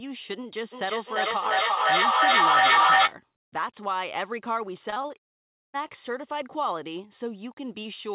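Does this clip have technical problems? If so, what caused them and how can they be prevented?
Yes. From 0.72 to 3.2 s there is feedback echo between two devices. The sound returns roughly every 0.4 s and builds to about 10 dB above the speech. Muting one device or using headphones prevents this.

From 4.9 to 5.12 s, repeated packet loss gives a choppy, robotic sound. Four short gaps, each up to 20 ms, were patched by continuing the last sound. A steadier, wired connection prevents this.

From 5.18 to 5.76 s, about 0.56 s of audio is missing. A brief fading fill gives way to silence, most likely from a long network dropout. A more reliable network link prevents this.

The narrow sound with nothing above 4 kHz comes from the G.711 mu-law call codec at 64 kbps.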